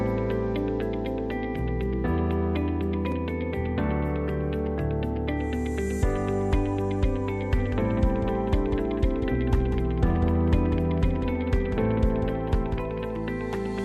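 From 7.59 s to 13.15 s there's a doubled audio track: a second, full-band copy trails the original by about a fifth of a second, roughly 10 dB quieter, with no room tail, and it cuts in and out abruptly. Likely a slower capture path or a misaligned edit.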